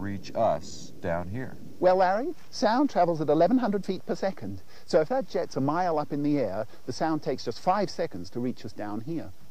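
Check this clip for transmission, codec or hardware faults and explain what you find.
No transmission, codec or hardware faults turn up anywhere in the clip.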